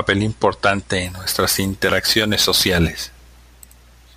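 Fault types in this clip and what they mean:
imaging from sample-and-hold upsampling: bright metallic fizz following the speech from 1.05 s, mirror images 11.03–22.05 kHz about 12 dB down, from repeated samples, which suggests roughly 22 kHz raised to 48 kHz unfiltered.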